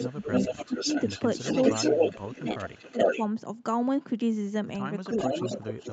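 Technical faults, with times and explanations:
0.0–1.22 s, 1.44–3.2 s and 5.1–5.93 s, echo leak: a copy of the talker returns about 0.43 s late at a level close to the speech itself, likely from a speakerphone whose echo canceller isn't fully removing it.
0.09–0.3 s, 0.48–0.87 s, 1.8–2.46 s, 2.91–2.98 s and 5.47–5.82 s, speech suppressed in double talk: the voice dips by roughly 10 to 20 dB in short pieces, likely because the canceller turns the talker down along with the overlapping echo.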